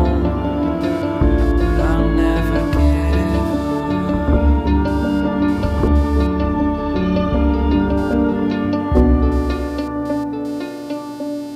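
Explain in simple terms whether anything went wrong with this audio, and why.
A faint, rapid buzz, pulsing about 200 times a second, runs from 0.81 s to the end. This is computer activity noise: the computer's working load disturbs the audio circuit's shared ground.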